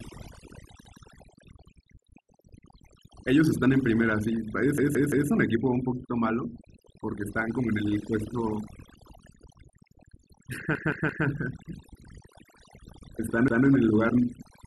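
Speech, put through overdone noise removal the whole way, so the background drops and breaks up into twinkly specks. There's also a repeated buffer stutter at 0.85, 4.78, 10.75 and 13.48 s, where a 171 ms chunk replays once or three times with a hard join, which fits an 8192-sample buffer.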